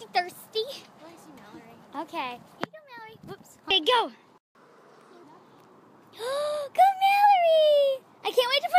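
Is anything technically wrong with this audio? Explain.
Yes, there are two faults, back to back.

From 4.38 to 4.55 s there is a playback stall. The sound cuts out mid-flow for about 170 ms, then resumes. The likely cause is a player that ran short of data or had its output thread blocked.

From 4.55 to 5.23 s comes catch-up at higher speed. The player works through its backlog by resampling at 1.25 times normal speed. The sound runs faster and rises about four semitones in pitch, then drops back to normal.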